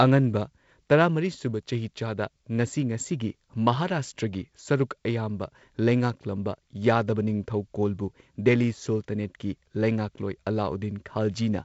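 There are no technical faults to describe in time order anywhere in this speech clip.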